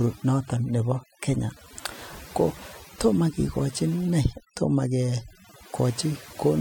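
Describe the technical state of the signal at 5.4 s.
Overdone noise removal is running through the whole clip, so it's present at 5.4 s too. The denoiser is set too hard, pulling bands near its noise estimate right down along with the quieter parts of the speech. The gaps go nearly silent with twinkly specks.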